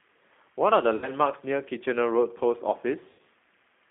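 The whole clip passes through a G.729 codec, and the narrow, rebuilt sound points to an 8 kbit/s coder of that family. Each 10 ms frame is reduced to a vocal-tract filter, a pitch predictor and a few pulses, so the speech comes back plainly rough and synthetic. The line passes only about 250 Hz to 3.6 kHz, which leaves the speech thin, with no low body and no high detail.

At 0.96 to 1.10 s there is VoIP packet loss concealed by the speech codec. About 60 ms of audio goes missing, which fits three lost packets. The decoder fills the gap by repeating its last pitch and filter at falling gain, so the speech is stretched into a fading sound. At 3.11 to 3.21 s a longer loss of about 80 ms, which fits four packets, gives the same stretched, fading fill, and the speech stays weak for a short while after each gap.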